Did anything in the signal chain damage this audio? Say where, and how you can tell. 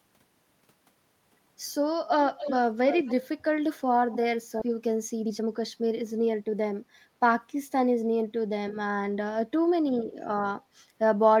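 Yes. An echo leak shows up at 2.29–2.59 s, 2.89–3.12 s and 4.13–4.19 s. A copy of the speech trails it by 261 ms, at about 10 dB down, then about 15 dB. This is likely call processing: the far end's echo canceller left loudspeaker pickup behind.

A skip ahead hits at 4.61 s. The sound jumps forward with no fill. Roughly a second is simply missing, and the two sides butt together. That points to the network path or an overflowing jitter buffer dropping queued audio.

A jitter buffer speed-up follows from 4.67 to 7.06 s. The speech runs at 116% speed, yet the pitch holds steady. Short pitch-period chunks were cut repeatedly, shedding about 0.4 s. The receiver was draining excess buffered delay.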